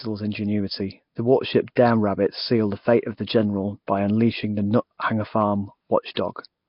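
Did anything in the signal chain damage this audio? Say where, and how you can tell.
Yes. Nellymoser compression damaged the speech throughout, at the codec stage. Nothing is present above 5.3 kHz, and the heavy rough, hissy halo and underwater smear fit a likely Nellymoser Asao encode at about 22 kbps. Weak bands were given no bits and were filled with noise.

Pre-echo, from the same codec stage, appears at 1.76 s as a 13 ms hiss and at 6.14 to 6.17 s as a 24 ms hiss, each just before a sharp attack. The block's quantisation noise, sized for the loud onset, spills into the quiet moment before it.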